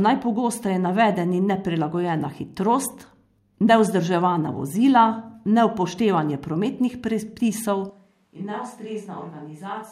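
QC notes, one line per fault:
7.9 s to end: switch to a distant microphone. After "vozila neupoštevanje prometnih predpisov" the speech abruptly turns hollow and roomy, loses bass and drops roughly 10 dB, with room noise about 35 dB below it. The close microphone likely dropped out. The waveform steps down, and the spectrogram shows thinner lows, reverb smear and a raised noise floor.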